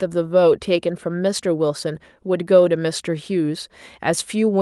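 No technical faults are audible anywhere in the speech.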